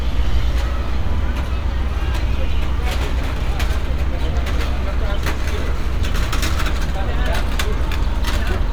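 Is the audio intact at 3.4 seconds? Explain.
Yes, at 3.4 seconds the sound runs intact, with no dropout, click, distortion or other fault at that moment.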